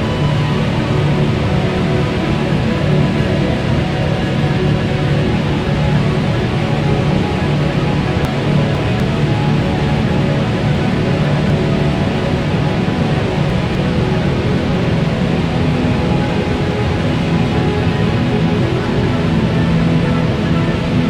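The audio has chunks out of order at three points: 8.25 to 9.0 s, 10.75 to 11.5 s, and 13.25 to 13.75 s. Each moment sounds briefly jumbled, with three hard joins. The chunks are 250 ms long. In the first two spots, one chunk plays two chunks late. In the third, it plays one chunk late. Nothing is missing. The sound is simply reassembled in the wrong sequence.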